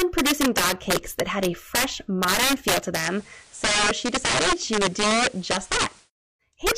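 Integer overflow runs through the whole clip: the speech was driven about 8 dB past the largest value the integer format can hold, and instead of limiting, the loudest peaks wrap to the opposite sign, so a small share of samples snap violently across the range, giving harsh cracks on louder syllables.

Digital radio blending to analogue begins at 2.94 s, just after "fresh modern feel to", and lasts until 6.10 s. The receiver cross-fades over 118 ms onto the FM broadcast, so the level drops about 1 dB, and a hiss rises, sitting well below the speech.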